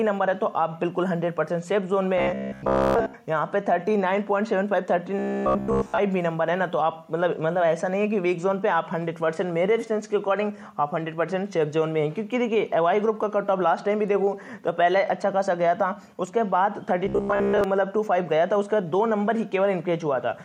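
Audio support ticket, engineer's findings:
Robotic sound from repeated short buffers at 2.18–3.14 s, 5.19–5.98 s and 17.06–17.64 s. Rigid metallic buzz at 66.8 Hz. Likely audio starvation, with 15 ms segments looped over most or, at 5.19 s, all of the sound.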